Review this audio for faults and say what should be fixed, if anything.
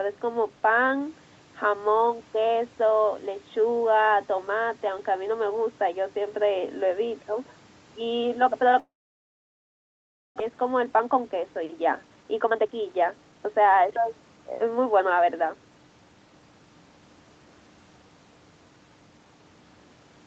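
At 8.79 s the sound breaks off. The last bit of sound is stretched into a fading buzz, then near silence holds until 10.42 s. About 1.5 s is silent, and about 1 s of speech never returns. This is likely a long network dropout. No packets arrived, so the receiver extended the final sound, then fell quiet. When audio resumed, the lost part was skipped. The delay also grew by about half a second. To prevent it, stabilise the network link and add redundancy or retransmission so gaps get filled.

From 10.49 s to 13.92 s the speech runs fast, at about 116% speed. The pitch stays the same, but it sounds rushed. This is a jitter buffer speed-up. After the dropout, delayed packets arrived together, and the buffer held too much audio. The receiver then removed many short pieces, each one or a few pitch periods long, to shrink the delay. About half a second was cut in total. To prevent it, use a slower, gentler buffer drain and reduce the packet bunching upstream.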